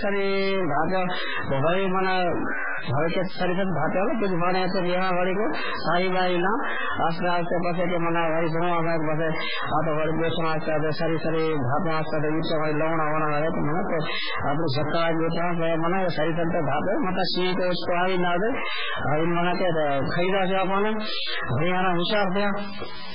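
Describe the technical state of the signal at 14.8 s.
At 14.8 s the speech carries distortion, as it does across the whole clip. The pauses fill with noise instead of falling silent. That points to a stuck bit, likely one data bit held at a fixed value, which throws about half the samples off by its weight.

MP3 compression is also present throughout. Nothing is heard above 5.2 kHz, and the remaining sound is watery and swirly, with smeared onsets. Weak frequency lines flicker between frames. The heavy damage fits a very low bitrate, around 8 kbps, likely starving the encoder of bits.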